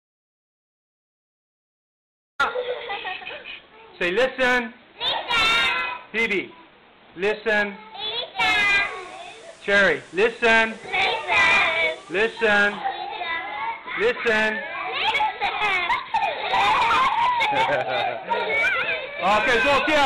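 Audio dropout to silence from the start to 2.39 s: the clip opens in a gap that is already under way, pure silence with no room tone, until the sound cuts in mid-flow. The input was likely lost while recording continued.

Digital radio blending to analogue from 8.62 to 12.83 s: the receiver lost the digital stream and cross-faded over about 140 ms to the FM broadcast and later back. Hiss rises to roughly 35 dB under the signal, and the level shifts by about 2 dB.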